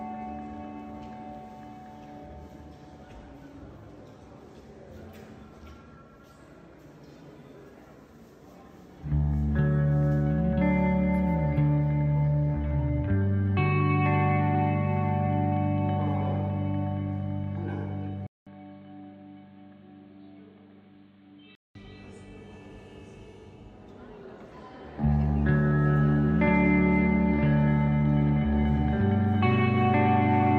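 From 18.27 to 21.75 s the sound turns dull and boxy, roughly 10 dB quieter, with nothing above 4.4 kHz and a new noise floor. A 0.2 s silence marks the change, likely an input switched to a poorer device.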